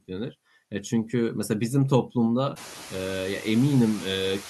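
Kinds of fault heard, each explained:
Noise suppressor artifacts: background noise sinks between phrases and returns under speech, as bands judged to be steady noise are cut about 12 dB.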